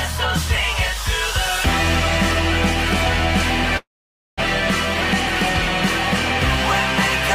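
From 3.77 to 4.41 s the sound smears into a fading buzz, then goes silent, likely a long network dropout; 400 ms never comes back before playback resumes.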